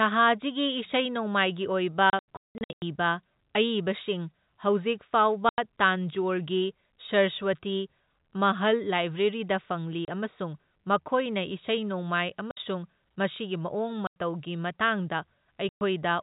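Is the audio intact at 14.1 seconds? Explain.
No. At 14.1 seconds the speech falls into a gap from 14.07 to 14.16 s. This is packet loss filled with silence. Audio packets failed to arrive, and the receiver played nothing in their place. The hole lasts 90 ms, which fits three lost 30 ms packets. The speech stops and restarts abruptly at hard edges. Around the gap, the narrow telephone band of G.711 coding can be heard.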